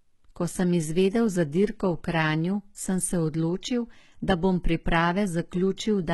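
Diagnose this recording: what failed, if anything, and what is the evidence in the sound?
Codec stage, likely heavy HE-AAC compression at about 16 kbps: treble rebuilt from copied lower bands sounds gritty throughout, with a hard spectrogram ceiling at 11.8 kHz.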